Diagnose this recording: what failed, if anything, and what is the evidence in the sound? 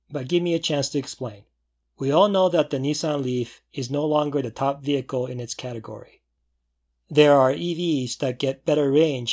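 Nothing failed; the sound gives no evidence of any fault.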